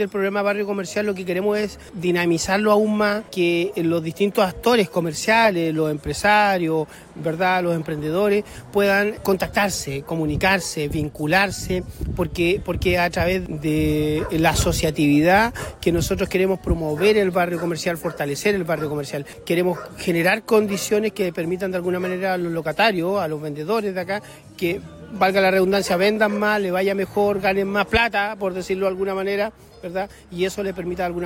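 Nothing goes wrong anywhere in this one, so there's no fault to point to at any moment in the audio.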